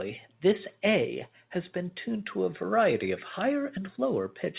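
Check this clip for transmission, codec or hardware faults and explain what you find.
No transmission, codec or hardware faults turn up anywhere in the speech. It has come through a call path working as designed, with nothing above 4 kHz, which fits narrowband G.711 mu-law coding at 64 kbps.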